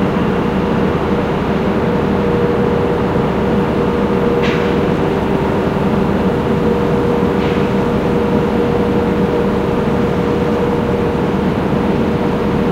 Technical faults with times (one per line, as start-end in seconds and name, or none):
none